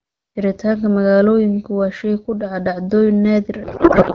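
At 3.63 s the speech collapses into a codec payload misread that lasts to the end of the clip at 4.15 s. The AMR-WB decoder, running cleanly at about 12.65 kbit/s before this, now reads its fields from the wrong bit positions, which points to octet-aligned frames being unpacked as bandwidth-efficient. What comes out is garbled noise and warble that barely tracks the speech. A spectrogram shows the harmonic structure giving way to smeared, noise-like energy, and the waveform loses its syllable-shaped envelope.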